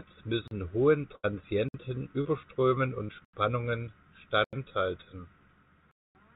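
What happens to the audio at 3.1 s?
A short concealed packet loss runs from 3.05 to 3.11 s: about 40 ms never arrived, so the receiver extended the preceding sound, leaving a brief smear.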